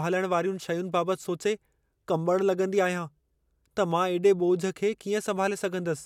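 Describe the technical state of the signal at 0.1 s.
At 0.1 s the signal is intact, with no audible fault at that moment.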